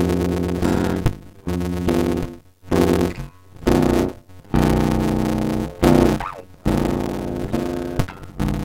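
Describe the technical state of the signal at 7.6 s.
At 7.6 s the music carries a block size mismatch (padded), present across the whole clip. Each block written is shorter than the block read, and the remainder is zero-filled, which fits 256-sample blocks. The regular gaps produce a 91.9 Hz buzz, and playback runs at 0.533× speed at roughly normal pitch.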